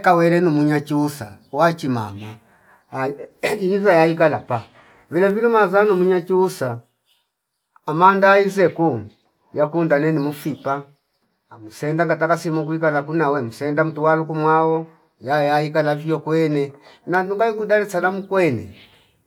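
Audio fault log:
No audible faults found.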